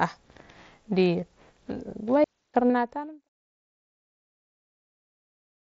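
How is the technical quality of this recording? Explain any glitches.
The recording has three glitches, two concealed Bluetooth packet losses and one wireless dropout, all in speech carried over the mSBC wideband headset codec, whose light graininess is audible, before a smooth fade-out that ends at 3.29 s.

At 1.21 s and from 2.65 to 2.70 s, there is concealed Bluetooth headset packet loss. Lost headset packets were patched with repeated recent waveform. The 15 ms and 45 ms gaps each buzz briefly and then warble as real audio returns.

From 2.24 to 2.54 s, there is a digital wireless dropout. The link lost too much data, so the receiver muted for about 0.3 s, leaving a clean hole of near silence without any noise burst.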